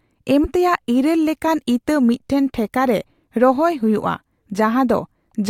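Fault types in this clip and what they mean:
Damaged data in a compressed stream: at 0.41 to 0.46 s, corrupted bytes in the compressed speech stream make the decoder misread those frames and lose sync while it hunts for the next valid frame header, leaving a brief glitch about 50 ms long.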